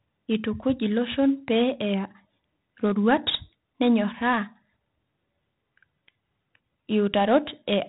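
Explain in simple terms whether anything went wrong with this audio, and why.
Something did go wrong, and it runs through the whole clip. The speech has been squeezed with 4-bit ADPCM compression, which records each moment only as a rough step up or down from a guess. That rounding leaves a gritty hiss riding on every louder syllable, and the sharper consonants come out distorted because the steps can't keep up. Nothing above about 3.8 kHz survives either, so the voice sounds dull and boxy.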